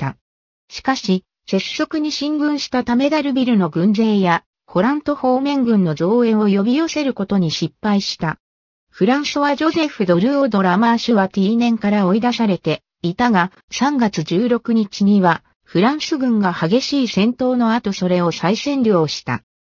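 From start to finish the high end sounds gritty and metallic, with spurious tones sitting roughly 20 dB below the sound and energy crowding right up to 6 kHz. This is aliasing: content above the fold folded back down, which fits an unfiltered drop from 44.1 kHz to 12 kHz.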